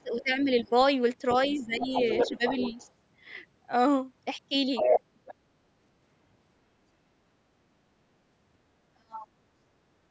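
From 0.00 to 0.73 s the talker dips by about 15 dB, speech suppressed in double talk, likely because the echo canceller turned down both sides while they overlapped. A faint scrap of the other side's voice leaking through, about 30 dB down, appears at 0.65–0.70 s. The talker drops again by about 15 dB at 1.49–1.91 s. From 1.73 to 2.90 s the leaked voice runs nearly as loud as the talker, about 5 dB below, likely from loudspeaker echo the canceller left in the microphone. A shallower dip of about 10 dB follows at 2.28–2.43 s. At 4.76–5.01 s the leak is about 5 dB louder than the talker, and a weaker scrap about 20 dB down follows at 5.26–5.34 s. The deepest suppression comes at 8.92–9.31 s, at about 40 dB, close to a cut-out. On a waveform the dips look like sudden narrowings of the envelope, the last almost flat. On a spectrogram the leaks appear as a second harmonic pattern that does not line up with the talker's, all of it below the 8 kHz ceiling of the call's microphone processing.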